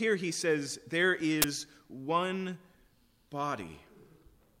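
The clip is speech with one technical fault. At 1.42 to 1.44 s a short, loud burst of harsh digital noise cuts through the sound. This is an uninitialised buffer. A block of audio was played out before any samples had been written into it. The leftover memory contents were read as if they were sound. The burst lasts about 20 ms, which fits one 20 ms buffer being sent unfilled.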